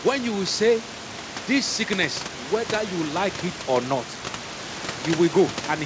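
Nothing stood out on listening to this speech.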